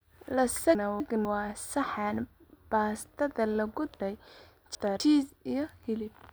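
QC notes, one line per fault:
0.75–1.25 s, chunks out of order: a 250 ms block of audio was delivered one block late, so it plays after the block that should follow it. Nothing is missing, but the two segments are swapped, giving a brief jumbled moment with three abrupt joins.
4.0–5.0 s, chunks out of order: one 250 ms block was held back three blocks and plays after the following 750 ms, so a full second of speech is rearranged. The misplaced fragment sounds displaced and garbled, with hard joins where the mismatched edges meet.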